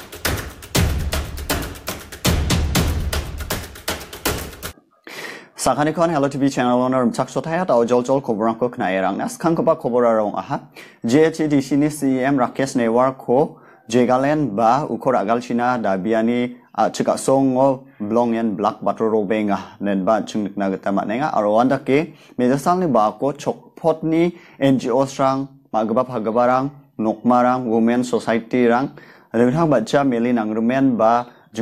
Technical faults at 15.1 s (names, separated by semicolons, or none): none